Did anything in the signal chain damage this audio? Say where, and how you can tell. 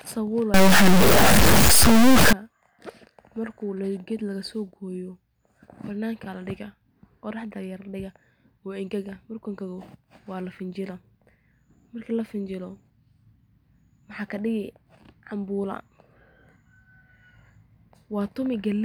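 Yes. From 0.54 to 2.33 s the audio has a harsh, buzzy distortion, most likely from a stuck bit on a data line at the converter or its wiring. With one bit held at a fixed value, about half the samples are pushed off by a large step of roughly -10 dBFS, following the speech waveform. Because that bit also flips with the sign of quiet samples, the gaps between speech in that stretch fill with loud, gritty noise.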